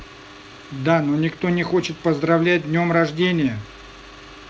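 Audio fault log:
No faults heard anywhere in this speech recording.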